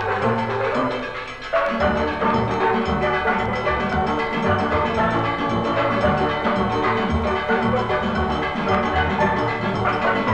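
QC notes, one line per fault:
No faults found; nothing to log.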